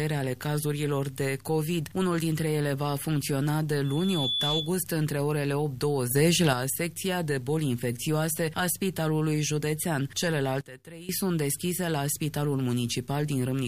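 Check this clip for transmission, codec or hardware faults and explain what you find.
Two kinds of fault are audible: one burst of acoustic feedback and two abrupt level changes.

Loudspeaker feedback squeal, 3.84 to 4.76 s. A microphone is picking up the loudspeaker it drives, and at one frequency the loop gain has gone past unity, so that tone feeds on itself. It appears as a pure tone at 3.4 kHz that swells to full strength in under half a second and reaches about the same level as the sound itself before it stops.

Sudden gain jumps, at 6.11 to 6.53 s and at 10.61 to 11.09 s. At 6.11 s the whole signal, background noise included, steps up by about 6 dB. At 10.61 s it drops by about 16 dB, again all at once. In both cases the level changes between one sample and the next, with no fade. The likely cause is a digital gain setting applied instantly rather than ramped in.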